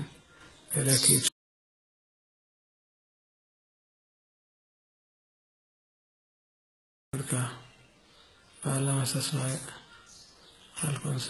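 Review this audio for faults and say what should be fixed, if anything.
Audio dropout to silence, from 1.28 s to 7.13 s: the speech cuts off abruptly and about 5.9 s of silence follows, with no room tone or noise floor underneath, before the voice returns mid-flow. That dead-flat gap means the recorder kept writing silence while its input was missing, most likely from a disconnected device, a broken link or an accidental mute. Whatever was said in that stretch is unrecoverable. To prevent it, secure cables and connections and monitor input levels live so a lost feed is caught immediately.

HE-AAC compression, throughout the clip: the treble sounds synthetic rather than captured, with sibilants turning gritty and lispy and a metallic sheen over the upper range. Nothing is present above about 11.8 kHz. This points to spectral band replication, where only the lower band is actually coded and the highs are rebuilt by copying lower content upward under a coarse envelope, so the rebuilt harmonics don't line up with the real ones. 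The damage is heavy, which fits a very low bitrate of around 16 kbps. To prevent it, record or export at a higher bitrate with plain AAC or a lossless format.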